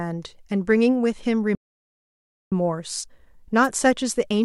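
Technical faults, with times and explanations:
1.55 to 2.52 s, playback stall: the speech halts mid-flow and the output goes silent for about 0.97 s before picking up again. This is likely the player running dry of buffered data or its audio thread being blocked, so nothing reached the output until it recovered. On the waveform it appears as a flat line with abrupt edges. On the spectrogram it is a clean vertical blank band with no decay tail, unlike a natural pause.
3.63 to 3.68 s, wireless microphone noise hit: a brief swish of static, roughly 45 ms long, washes over the speech. The FM radio link from the microphone momentarily faded as reflected signals cancelled, and the receiver's hiss surged up to fill the gap. A spectrogram shows a narrow vertical smear of broadband noise reaching into the upper kHz range. The waveform shows a short burst of ragged, dense energy riding on the speech.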